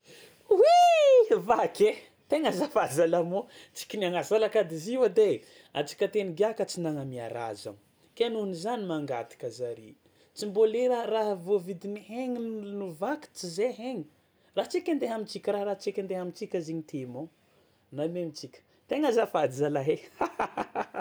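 At 0.83 s there is a single sharp click, heard as one thin vertical line across the spectrum. The likely cause is dropped samples: a couple of samples missing from the stream, so the waveform jumps straight to a later value. That gap is only a tiny fraction of a millisecond, far too short to silence anything. A dropout would leave an audible hole, and crackle would repeat, but this is one isolated tick with no break in the speech.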